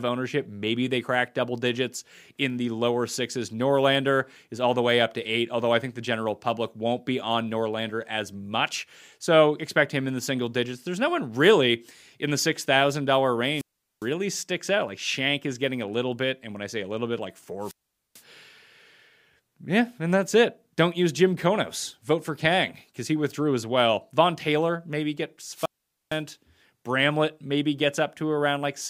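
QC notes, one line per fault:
13.52–14.07 s, 17.61–18.22 s and 25.52–26.21 s: wireless microphone squelch dropout, three times. The radio link fades, hiss swells, then the receiver's squelch cuts the output for about 0.41 s, 0.44 s and 0.46 s. The sound returns on "sticks out" and cuts away after "a little bit like". On a spectrogram each shows a short smear of broadband noise, then a near-blank column. The waveform goes nearly flat for each mute.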